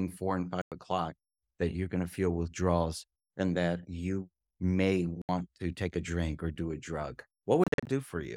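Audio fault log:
0.62–0.72 s: Bluetooth dropout. About 100 ms of silence after "four and", before "o'clock that you're going". Likely late packets were dropped, and the speech resumes as if it had played on.
5.22–5.29 s: Bluetooth dropout. About 70 ms of silence after "and that you may", before "to take a drink". Likely dropped packets.
7.64–7.87 s: Bluetooth dropout. Short gaps totalling about 160 ms over 230 ms after "or do a drug". The longest gap is about 40 ms. Likely scattered packet loss.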